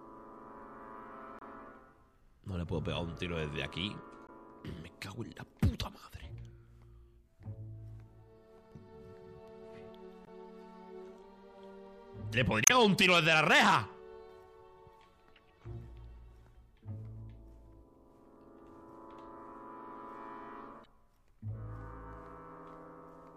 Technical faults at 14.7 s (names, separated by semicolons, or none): none